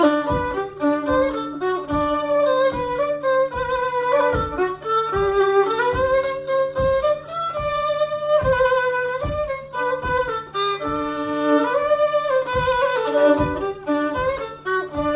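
Nothing goes wrong anywhere in the recording, so there's no technical fault to point to at any moment.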